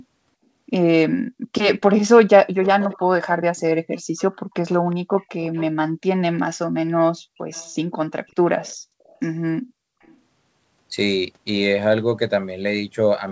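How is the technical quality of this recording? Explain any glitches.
The recording has a recurring echo leak. The audio also has nothing above 8 kHz, as expected on this call path.

Echo leak at 1.89–2.2 s, 2.63–2.99 s, 3.97–5.66 s, 6.37–6.43 s, 7.5–7.76 s, 8.63–9.18 s and 10.02–10.18 s. The likely cause is a far-end echo canceller letting loudspeaker pickup through. The result is a faint copy of the speech trailing 362 ms behind, around 15 to 35 dB below it and strongest near 2.6 s.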